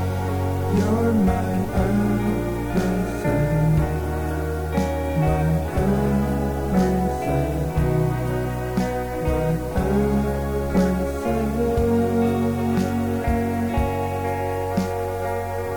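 From start to finish there's a steady, even hiss: low bit depth with dither. The sound was reduced to just 6 bits with dither added before rounding, so the quantisation error turns into flat white noise, sitting roughly 25 dB below the signal, with no gritty distortion.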